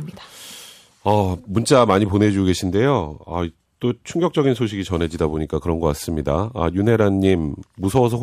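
A speech recording with hard clipping in three spots: 1.09 to 1.14 s, a longer stretch from 1.72 to 2.23 s, and 7.97 to 8.00 s. The level runs about 2 to 3 dB past what the chain can pass, so the peaks get sliced flat. Those squared-off tops throw harmonics high up the spectrum, which you hear as a brief crackly roughness. The longest stretch is the half-second run around 2 s, where the overload is also greatest.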